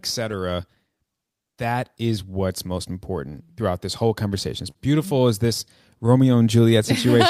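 There's clock drift between sender and receiver all the way through: the sender's clock runs about 3% slow, so the receiver keeps running short of audio. From 0.95 to 4.09 s you get repeated timing corrections, with small pieces repeated to stretch playback to 97% speed, adding roughly a tenth of a second. Then at 4.70 to 4.78 s there's a short stall from a late packet: the buffer ran dry, and the last sound was held for 43 ms before speech picked up where it left off, nothing lost.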